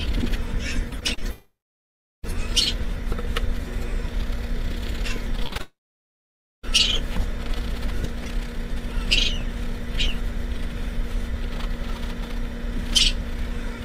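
From 0.89 to 1.24 s the sound turns choppy, with small pieces missing. This is repeated packet loss: five short gaps, the longest 30 ms, about 120 ms lost in total. Each was patched by stretching the preceding sound, so almost a third of that stretch is filler rather than real audio.

At 1.32 s a brief fading buzz gives way to silence that lasts until 2.25 s, a long network dropout. Roughly 0.9 s never arrived, and about 0.7 s of that is plain silence. The likely cause is a stall in the network stream: the receiver extended the last sound for a moment, then had nothing to play. When the audio returns, the missing part is skipped rather than recovered.

The same pattern repeats later. From 5.36 to 5.61 s there is another choppy burst of repeated packet loss, with six gaps of at most 20 ms, about 100 ms missing, and over a third of the stretch concealed. It runs straight into a second long network dropout from 5.61 to 6.65 s. 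Around 1 s is lost, and about 0.9 s of it is silence after the fading concealment. This gap again likely comes from the stream stalling, and the audio resumes without the lost portion.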